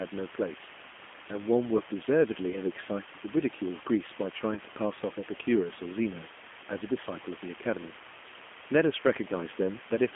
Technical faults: low bit depth with dither; G.729 codec; VoIP packet loss concealed by the speech codec

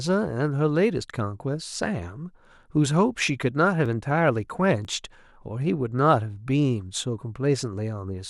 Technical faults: overlap between stream segments

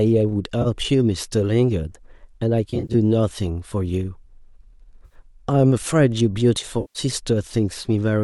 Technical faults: AAC frame loss with concealment

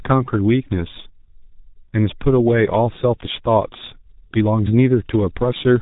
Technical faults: G.723.1 codec

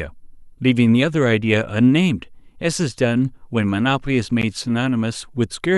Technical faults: gap at a join of encoded pieces

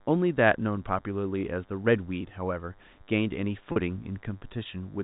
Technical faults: DECT cordless phone buzz; packet loss with pitch repetition

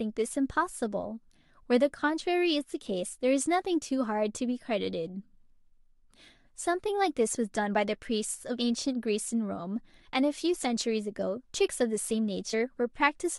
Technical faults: compressed frames skipped

